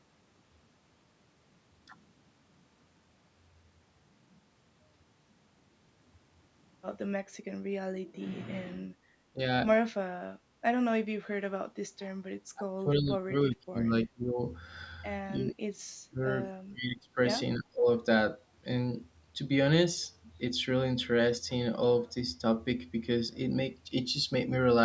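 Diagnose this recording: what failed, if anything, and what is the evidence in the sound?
Call processing failed: the speech is turned down by about 15 to 35 dB at 9.33–9.39, 12.53–14.42, 15.35–15.64, 16.05–16.29, 16.6–17.18 and 17.57–17.87 s, likely speech suppressed in double talk by an echo canceller. Unlike packet loss, these are gain dips, not clicks or repeats.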